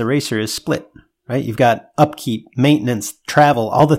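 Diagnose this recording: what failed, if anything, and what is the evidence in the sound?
Small skips in the speech at 0.58, 1.57 and 2.55 s, about one second apart, each losing a fragment of roughly 15 ms, with the two sides butted together. This is audio missing between chunks, likely at the driver or buffer stage, which drops samples while handing over each one-second block.

A single loud pop sits on the speech from 0.75 to 0.77 s, peaking roughly 10 dB above it, while the speech carries on underneath. The likely cause is a voltage spike in the analogue wiring or converter, from a plug, switch or static discharge.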